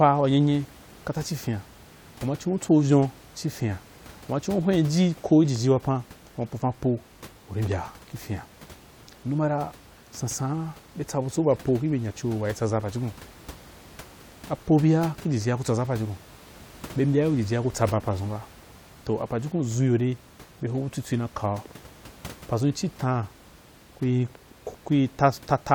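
No technical faults can be heard anywhere in the speech. Room noise sits in the background, about 23 dB below the speech, and belongs to the recording space rather than to the system.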